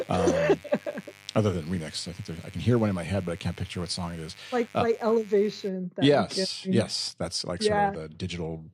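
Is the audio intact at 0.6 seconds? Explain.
No, at 0.6 s you're inside a stretch of mains buzz running from the start to about 5.69 s, just before "yes yes that's like". Sharp switching spikes twice in every 50 Hz mains cycle stack up harmonics into the kilohertz range, giving a steady, raspy buzz roughly 25 dB below the speech.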